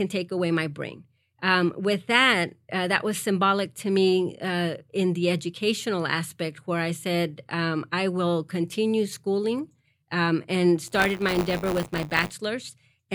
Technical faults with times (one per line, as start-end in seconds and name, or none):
10.86-12.33 buffer tearing